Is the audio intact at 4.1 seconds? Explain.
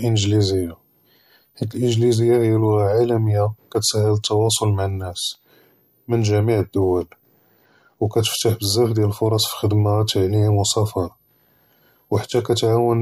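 No, at 4.1 seconds the switching supply whistle is there, as it is through the whole speech clip. It's a faint high whistle around 15 kHz, wandering between roughly 12.6 and 15.3 kHz, sitting about 45 dB under the speech. That points to a power supply switching in audible bursts or beating against another supply.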